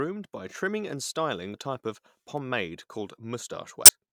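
At 1.50 to 1.55 s and again at 3.85 to 3.90 s, damaged data in the compressed stream throws the decoder off sync, giving a brief glitch in the speech.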